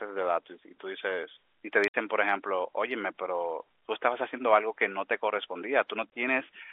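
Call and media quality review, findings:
Packet loss filled with silence, 1.88–1.94 s (60 ms) and 6.10–6.12 s (20 ms): flat-line waveform gaps, blank spectrogram columns, hard edges. Receiver zero-fills lost packets, consistent with 20 ms frames.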